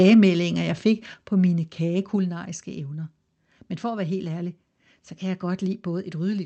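From the start to 0.27 s the loudest moments of the speech have a harsh, crackly edge, their peaks flattened by microphone overload. The input level was likely set high enough to drive the converter about 3 dB past its limit, shaving off the tops of a small share of the waveform.

The microphone volume is stepped down three times, each a sudden drop in the level of both speech and background: about 3 dB at 0.14 s while the distortion is still present, about 5 dB at 1.14 s just before "på mine", and about 3 dB again at 2.16 s just after "på mine". The likely cause is call software reacting to the hot, clipping input by cutting the device's input volume in one step each time. All of it arrives through a call path with a top end ending around 8 kHz, which fits Opus.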